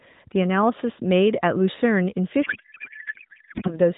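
A codec payload misread runs from 2.44 to 3.75 s: AMR frames packed octet-aligned were read as bandwidth-efficient, so the decoder pulls fields from the wrong bit positions and the speech turns into garbled noise and warble that barely tracks it, over AMR narrowband audio with light coding damage.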